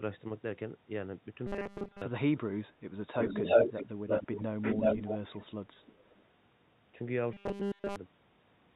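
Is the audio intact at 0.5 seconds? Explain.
Yes, the audio is intact at 0.5 seconds, with no dropout, click or distortion at that point.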